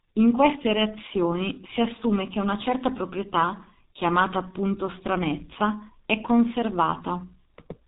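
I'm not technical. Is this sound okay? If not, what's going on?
No, the whole clip has gone through the G.723.1 codec, an old internet-phone squeezer. Nothing above about 3.8 kHz survives, so the speech sounds muffled, hoarse, with smeared consonants.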